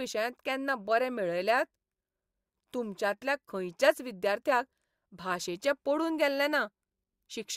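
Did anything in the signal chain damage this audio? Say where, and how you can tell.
No, nothing in the chain has audibly damaged this speech recording at any stage.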